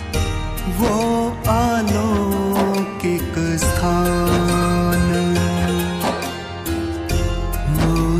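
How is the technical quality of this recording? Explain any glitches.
No audible glitches or faults.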